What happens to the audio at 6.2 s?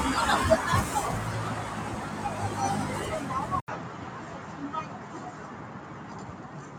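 At 6.2 s the sound sits inside a duller stretch that began at 3.6 s and runs to the end. The band is narrower, so the top end sounds cut off and boxy. A faint new background noise sits roughly 30 dB under the signal. The loudness barely changes. An 80 ms gap marks the change at 3.6 s. The likely cause is the input switched to a poorer device, a narrower-band microphone with its own noise.

The noise suppressor applied to music or sounds is also active here, as it is across the whole clip. It was built for speech. It mistakes steady tones, ambience and decay tails for noise and pulls them down, while sharp onsets pass through. At this moment the held parts of the sound dip and recover by around 5 dB. The result is an audible pumping, with tails thinning out after each attack.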